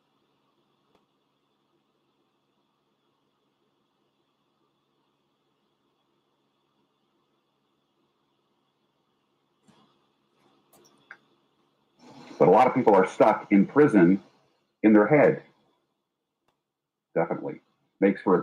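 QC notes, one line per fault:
No faults detected in this clip.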